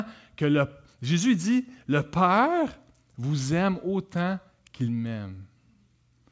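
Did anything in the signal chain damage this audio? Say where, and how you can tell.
No, nothing in the chain audibly damaged this speech clip; there is no stage where a fault can be placed and no moment that needs a timestamp.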